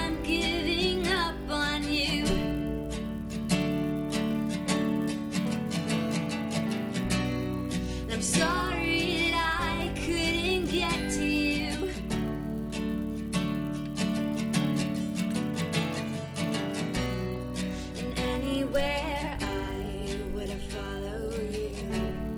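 Throughout, the resampler restarted on every block: 10 ms blocks converted from 24 kHz to 48 kHz independently leave edge errors, a 100 Hz buzz heard only with signal, visible as vertical striations every 10 ms.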